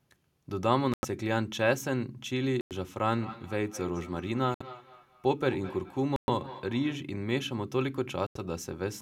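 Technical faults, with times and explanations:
0.94 to 1.05 s, 2.61 to 2.73 s, 4.54 to 4.62 s, 6.16 to 6.29 s and 8.26 to 8.37 s, Bluetooth stall: The speech drops to silence five times, for 93, 99, 62, 119 and 89 ms. Each time it resumes without a fade. The likely cause is radio interference delaying packets to the wireless headphones. Their small buffer empties and playback halts. It restarts only when the resent data arrives, so each gap is a hard cut rather than a dip.
3.08 to 7.10 s, feedback echo between two devices: A second copy of the speech trails the original by about a fifth of a second. It peaks at about 15 dB below the speech. This happens when two devices in one room share a call. One plays the other's audio, and the first microphone captures it again. Each device's echo canceller ignores sound from the other, so the delayed copy passes straight through.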